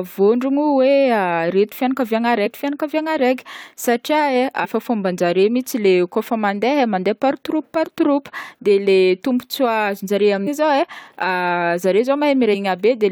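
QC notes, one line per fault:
2.45–2.47 s, 4.63–4.66 s, 10.46–10.48 s, 12.53–12.55 s: damaged data in a compressed stream. Each is a brief 22 ms glitch in the speech where the decoder misreads corrupted frames and loses sync until it finds a valid frame header.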